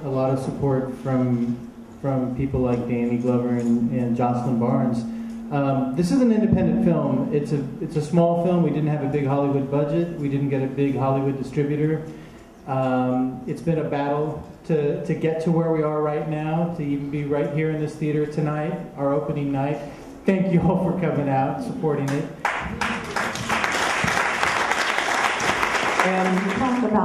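Nothing goes wrong anywhere in the clip, so there's no technical fault to point to.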